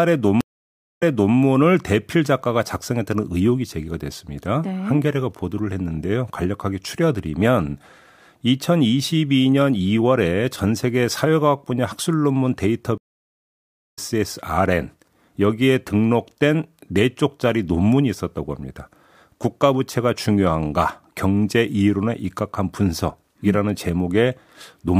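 Stream reconnects at 0.41–1.35 s and 12.98–13.99 s: the connection dropped, the player reconnected and restarted decoding mid-stream. The first gap lasts 579 ms and then replays 366 ms of earlier speech. The second lasts 969 ms and resumes roughly a second later, skipping that speech.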